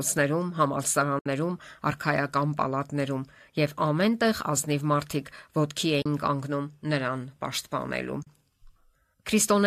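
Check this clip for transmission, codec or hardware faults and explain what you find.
Three short dropouts break up the speech, all the same fault: AAC frame loss with muting. The gaps fall at 1.19 to 1.26 s (about 70 ms), 6.02 to 6.06 s (about 40 ms) and 8.23 to 8.27 s (about 40 ms), lengths that fit whole frames of roughly 10 ms, likely from a low-delay AAC coder. Each lost frame is decoded as silence, and the overlapping windows taper the sound down and back up, so you hear soft-edged holes. On a waveform each gap narrows smoothly to a flat line, and on a spectrogram it shows as a clean vertical band of near-silence across all frequencies.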